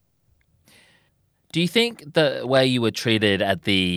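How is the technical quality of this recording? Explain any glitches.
One glitch stands out: a loud pop from 2.57 to 2.59 s, between "you think the" and "you were". A brief voltage spike, likely from a switch, plug or static discharge, entered the signal chain, producing a single sharp pop roughly 10 dB above the speech, which carries on underneath.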